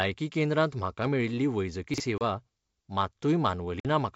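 Chunks out of order, 1.94 to 2.00 s, just after "केंद्रांत म्हाका मेळिल्ली": a 20 ms piece of audio was written two chunks late, so it plays after material that should follow it. Nothing is missing, but the shuffled order and three hard joins make a brief jumbled moment.

Packet loss on an ADPCM call, at 2.18 s (30 ms gone) and 3.80 s (50 ms gone): lost packets became hard-edged silence, and the decoder's predictor and step size drifted from the sender's, so the speech comes back slightly distorted before settling.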